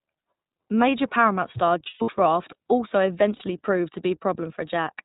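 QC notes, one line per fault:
Throughout, iLBC codec: The speech sits in a narrowband channel with nothing above 4 kHz, so sibilants and breath are dulled. Each short frame's excitation is coded independently, which gives the voice a plainly audible rough, slightly synthetic grain. The character fits the 20 ms frame mode at around 15.2 kbps. Fine detail in the excitation is approximated rather than reproduced.
1.84–2.10 s and 3.36–3.42 s, lost iLBC frames: In the first range, about 200 ms of audio goes missing in patches scattered across roughly 240 ms, with the longest gap lasting around a tenth of a second. The second dropout loses 40 ms. The decoder covers each hole by repeating the last pitch cycle blended with noise, which produces a held, buzzy, breathy vowel. Because iLBC frames stand alone, the voice is right again almost immediately after each gap.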